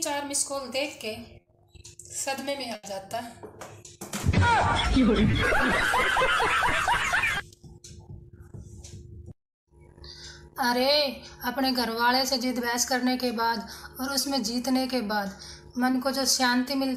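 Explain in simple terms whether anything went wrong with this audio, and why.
Six brief dropouts are short concealed packet loss, at 1.41 s (40 ms) and 5.31, 7.37, 10.11, 14.21 and 15.91 s (20 ms each). The receiver filled each tiny gap by extending the preceding sound, so each one comes across as a quick smear or wobble.

At 2.75 s there is a burst of packet loss: 80 ms of audio never arrived. The receiver stretched the last sound into a fading buzz or hiss, then jumped ahead, so that stretch of sound is missing.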